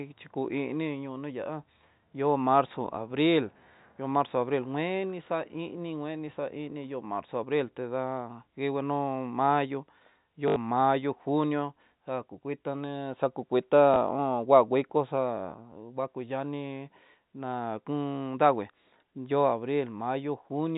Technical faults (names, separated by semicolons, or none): packet loss with last packet repeated